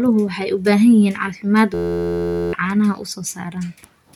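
From 1.74 to 2.53 s a system hang loop replaces the speech. The machine stalls while the hardware replays one 11.6 ms slice, which fits a 512-sample buffer. Unlike a dropout's silence or a slower stutter, it sounds like a steady 86 Hz buzz.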